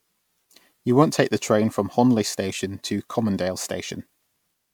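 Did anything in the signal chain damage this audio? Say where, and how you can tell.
Yes, at the codec stage: the speech was likely decoded and re-encoded as MP3 about four times, consistent with 128 kbit/s passes. The result is generation loss throughout, with swirly, hollow, smeared tone and blurred consonant attacks beyond what one such encode would cause.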